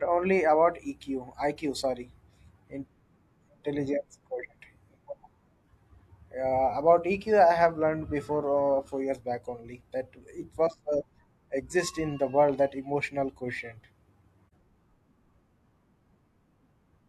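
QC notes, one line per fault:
14.49–14.53 s, AAC frame loss with muting: the speech falls into a brief dip of about 43 ms, which fits a single lost frame whose spectrum the decoder replaced with zeros. Because the overlapping transform windows taper into and out of the missing block, the level fades down and back up rather than cutting off. That soft-edged dip distinguishes it from a hard sample dropout, which snaps to silence with audible clicks at its edges.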